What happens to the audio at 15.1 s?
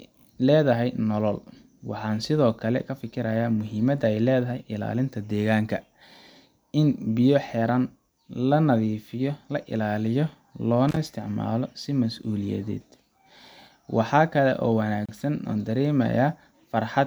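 The speech drops out briefly. A gap at a join of encoded pieces opens from 15.06 s to 15.09 s, lasting about 31 ms. Two separately encoded segments were butted together without trimming. The encoder's start-up delay and the padding of the last frame both stayed in as silence. The codec smears the edges of the gap, so the silent part is shorter. The speech then resumes exactly where it stopped.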